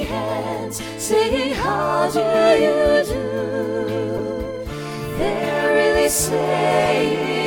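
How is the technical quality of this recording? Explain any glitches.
Two short, harsh blips mar the recording, at 4.17 to 4.20 s and 6.84 to 6.88 s, each a brief chirp of stray noise well up in level. This is a corrupt frame decoded: damaged compressed data, likely a couple of frames each time, was played anyway, scattering energy across wrong frequencies.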